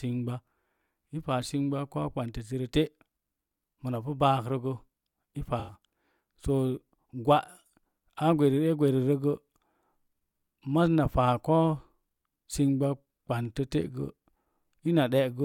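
From 5.59 to 5.74 s, AAC frame loss with concealment leaves a smeared, noisy patch as the decoder repeats the last spectrum. On a spectrogram it appears as a blurred, flattened band, consistent with about four lost frames.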